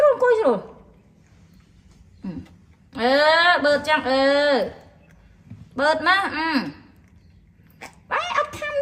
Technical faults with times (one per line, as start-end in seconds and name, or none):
1.70-3.01 call bitrate drop